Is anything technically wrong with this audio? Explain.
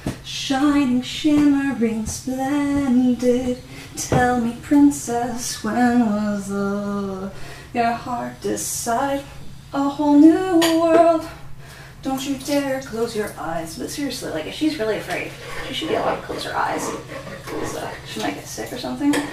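No, nothing here stands out as a technical problem; it all sounds just as it should.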